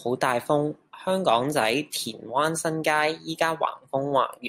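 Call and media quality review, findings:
Nothing to flag here, the speech comes through without any faults worth ticketing.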